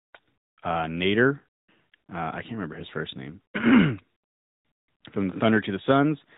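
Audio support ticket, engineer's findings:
AMR narrowband mobile codec, whole clip. Speech band-limited, nothing above 4 kHz, voice thin and buzzy, plainly audible synthetic edge. Sound fits roughly 10.2 kbps AMR-NB: 8 kHz sampling, vocal-tract model driven by sparse pulses per 5 ms subframe, too few bits to rebuild detail.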